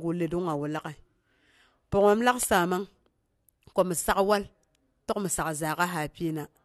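From 0.32 s to 3.06 s the speech carries CD scratch ticks: a regular train of about five clicks per second, each lasting only a few milliseconds. A disc blemish corrupted more data per rotation than error correction could rebuild, so the player interpolated or muted those samples.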